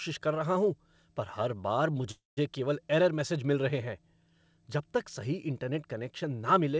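At 2.11 s, just after "हूँ पर हर बार", the speech stops and a call audio freeze begins. It lasts until 2.39 s. Packets were likely held up in transit, so the jitter buffer ran dry. The receiver stretched the last sound into a fading buzz or hiss, then held about 160 ms of silence. Speech resumes at "केवल एरर मैसेज मिल" with nothing lost, but everything after now runs about 256 ms late. The band stops near 8 kHz throughout, which fits a G.722 call codec.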